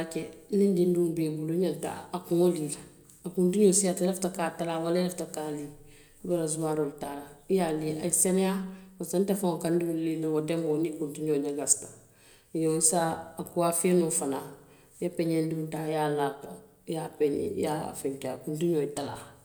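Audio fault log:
No faults are heard anywhere in this speech recording. There is nothing in it to timestamp or enter in this log.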